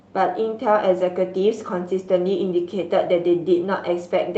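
Speech carried over a WebRTC call path, its top end rolling off near 12 kHz in a way that fits an Opus link at a moderate bitrate, with no technical faults to report.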